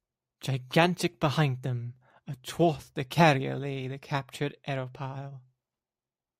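No technical faults can be heard in this speech recording.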